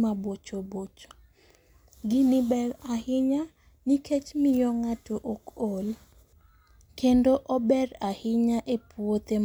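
Nothing goes wrong anywhere in this bit of speech, so there's no fault to point to at any moment.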